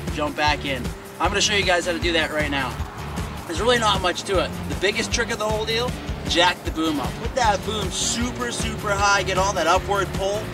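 At 2.72 s a burst of loose connector crackle begins, lasting about 150 ms to 2.87 s. A worn or dirty contact in the signal path briefly lost and regained connection several times, chopping the audio on and off in quick, uneven succession, with any DC on the line turning each break into a pop. It sounds like ragged scratching, and its irregular spacing sets it apart from the evenly repeating ticks of a buffer dropout or digital click.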